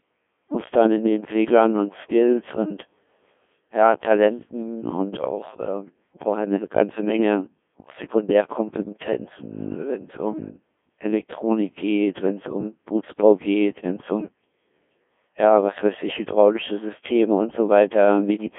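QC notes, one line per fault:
throughout, Codec 2 vocoder: heavy damage, the speech resynthesised from sine waves using only pitch, voicing, energy and a spectral envelope, so it sounds robotic and buzzy; the band is 200 Hz to 3.5 kHz with nothing above 3.6 kHz, which fits a 1.6 kbit/s mode.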